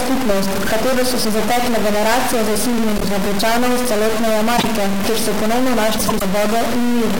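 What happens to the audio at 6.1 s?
Frames out of order run from 5.98 to 6.22 s, just after "kjer so ponovno". Two neighbouring blocks of about 0.1 s each were decoded in swapped order, so this short stretch plays its halves exchanged, heard as a garbled flutter with no lost time.

A stuck bit also affects the audio here, as it does throughout: added noise on the speech, with noise filling the gaps. The likely cause is one data bit held at a fixed value by a faulty line or converter.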